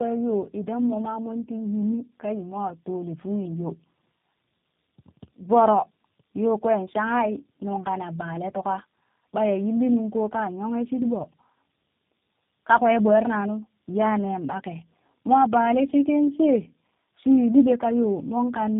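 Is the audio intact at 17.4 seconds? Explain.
No. Tandem speech coding runs throughout, so 17.4 s is affected. Speech passed through three speech coders in a row, each recoding the last's damage. It sounds rough, muffled and warbly, with nothing above 3.7 kHz.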